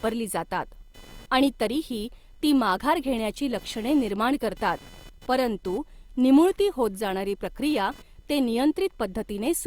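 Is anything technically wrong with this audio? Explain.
Yes. Throughout the speech there is computer activity noise: a faint buzzing, chirping layer pulsing at around 500 Hz, roughly 30 dB below the speech. Processor or graphics load shifting the audio circuit's shared ground causes it. On a spectrogram, look for thin harmonic stripes and bursts that vary independently of the voice.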